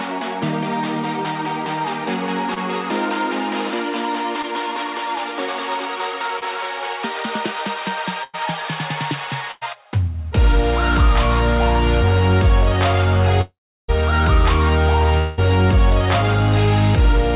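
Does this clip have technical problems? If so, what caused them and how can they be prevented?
Yes. Short concealed packet loss occurs at 2.54, 4.42 and 6.39 s. About 20 ms of audio is missing each time, and the decoder bridges the hole by extending the preceding sound before blending back, which leaves a brief smear or wobble. Prevention: use forward error correction or a slightly deeper jitter buffer.

A burst of packet loss occurs at 8.24–8.35 s and 9.51–9.63 s. Each time about 100 ms is gone. Concealment holds the last sound as a fading buzz or hiss, then playback resumes later with that stretch skipped. Prevention: enable redundancy or FEC, and reduce congestion on the link.

A long network dropout is the likely cause of the gaps at 13.41–13.90 s and 15.18–15.40 s. The first loses roughly half a second, with the concealed tail giving way to about 350 ms of silence. The second loses 200 ms, filled throughout by fading concealment. 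Prevention: stabilise the network path, for example by moving from congested Wi-Fi to a wired connection.

The call path itself is G.711 mu-law at 64 kbps, so nothing above 4 kHz is present.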